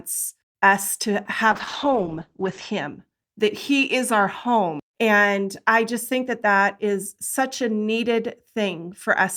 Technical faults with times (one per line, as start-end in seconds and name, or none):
1.54-3.07 call bitrate drop